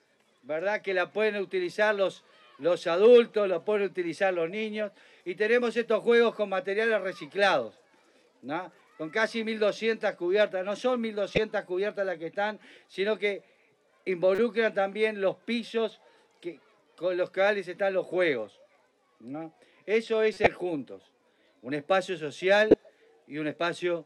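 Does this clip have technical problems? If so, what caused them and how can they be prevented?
Yes. Corrupt frames were decoded at 11.35–11.38, 14.35–14.39, 20.34–20.47 and 22.68–22.74 s. Damaged bits misplaced energy, causing brief chirps, squeaks, blips or noise bursts. Error checking with frame concealment or retransmission would prevent this.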